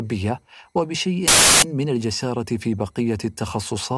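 At 1.28 s the speech is cut into by a burst of harsh static that lasts until 1.62 s, about 0.35 s. This is file tags played as audio. A block of embedded data, here a compressed cover picture, was read by the player as if it were samples. Compressed bytes look random, so they come out as very loud white noise. The burst starts and stops abruptly, with hard edges on both sides.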